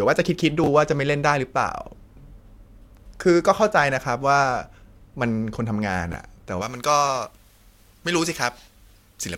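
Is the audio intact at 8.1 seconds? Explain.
No: pre-emphasis left on from 6.62 s to the end. The treble boost, consistent with a J.17 curve, was never undone, leaving 10 kHz about 11 dB hot, so the speech sounds thin, bright and sibilant.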